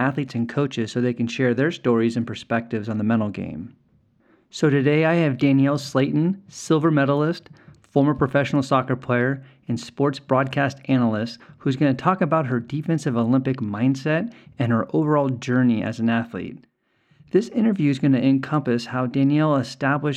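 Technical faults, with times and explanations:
No technical faults are present.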